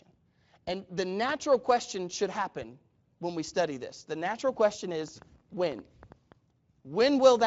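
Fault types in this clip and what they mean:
Train of clicks: after "natural question", about ten like-shaped clicks at 4.2 per second, unevenly spaced and about as loud as the speech, likely interference, unlike random crackle.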